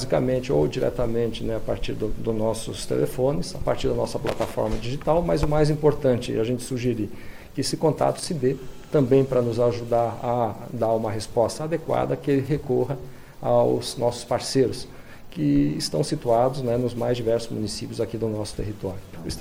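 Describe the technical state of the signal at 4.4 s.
At 4.4 s the signal is broken up by loose connector crackle. It runs from 4.27 to 4.52 s, about a quarter of a second. A worn or dirty contact is shifting and losing touch many times in quick succession. Each break cuts the signal for an instant before it returns. The result is chopped audio. It is heard as an irregular burst of scratchy crackle laid over the sound.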